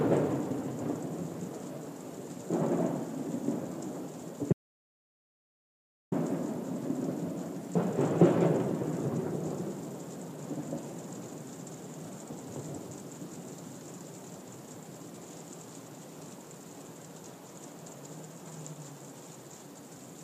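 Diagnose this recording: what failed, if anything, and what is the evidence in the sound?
Input was likely lost to a disconnected device, a failed link or a mute while recording continued. The result is an audio dropout to silence from 4.53 to 6.12 s: the sound cuts off mid-flow, and 1.59 s is replaced by silence with no room tone.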